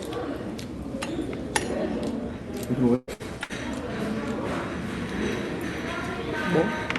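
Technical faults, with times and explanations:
2.95 to 3.52 s, burst of packet loss, three times: 2.95 to 3.10 s, 3.13 to 3.23 s and 3.44 to 3.52 s. Each time packets failed to arrive, so the receiver stretched the last sound into a fading hiss. It covered about 120 ms in the first gap, which decayed into roughly 20 ms of silence, and about 60 ms in each of the other two. The sound then resumes further on, with that stretch missing, over a call-codec path limited to about 12 kHz.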